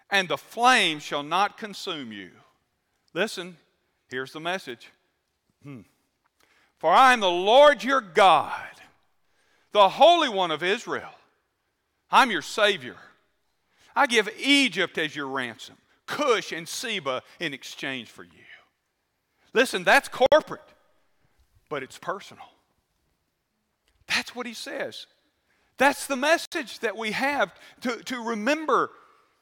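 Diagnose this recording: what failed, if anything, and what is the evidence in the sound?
The speech drops into brief gaps twice: at 20.26 s for about 58 ms, and at 26.45 s for about 66 ms, just before "that we have to". Each hole has smeared edges, and the sound resumes exactly where it stopped. This is a gap at a join of encoded pieces, a codec-stage fault: separately encoded segments were concatenated untrimmed, so each encoder's leading delay and final-frame padding remain as silence at the seam.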